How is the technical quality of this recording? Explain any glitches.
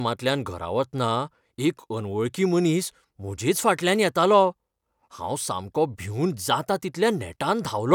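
The technical quality of the recording is sound, with no glitches to explain.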